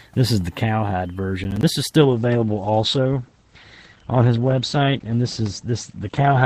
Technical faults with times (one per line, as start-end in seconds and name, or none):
1.44-1.63 processor overload crackle
2.02-6.46 adaptive stream at a lower bitrate